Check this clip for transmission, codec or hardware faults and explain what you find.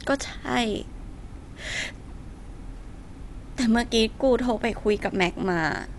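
There is one fault, and it runs through the whole speech clip. Throughout, nothing reaches above about 11.5 kHz, so the speech sounds dull, and there is plainly audible rough, fluttering noise around tonal parts. This is likely Dolby Digital compression: the coder narrows the band and, short of bits, replaces many spectral lines with dither noise. The damage fits a low bitrate near 64 kbps. A plain low-pass filter would dull the sound without that noisy fill.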